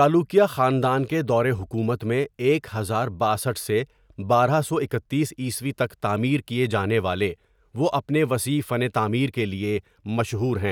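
No technical faults can be heard anywhere in the recording; the signal stays intact, with no interruptions or disturbances to the speech.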